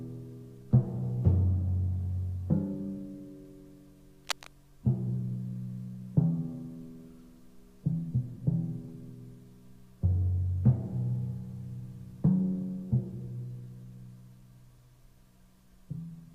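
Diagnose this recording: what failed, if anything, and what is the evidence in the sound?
From 4.19 to 4.47 s, a dense, irregular scratching burst sits just a few decibels below the sound, pointing to the analogue wiring stage. The likely cause is cable scratch noise from a worn cable or connector. Its contact resistance fluctuates as it moves. On a spectrogram this appears as a ragged broadband smear, and the waveform shows jagged spikes.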